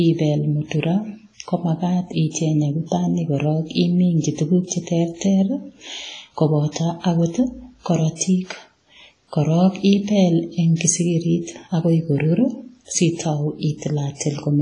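Across the whole speech clip the sound is heavily smeared: there is ringing, the speech takes on a washy, swirling quality, and a hiss rises and falls with the signal. Nothing is present above 10.3 kHz. This is likely WMA compression, with the damage pointing to a low bitrate of around 24 kbps. Long transform blocks spread quantisation noise tens of milliseconds around each sound, and weaker spectral detail has been discarded outright.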